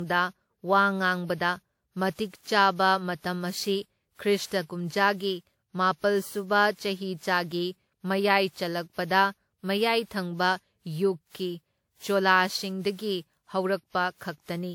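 Speech, with generation loss throughout. It sounds swirly, smeared and hollow, with nothing above 19.9 kHz. Likely cause: about seven lossy re-encodes, pointing to WMA 1 at 96 kbit/s.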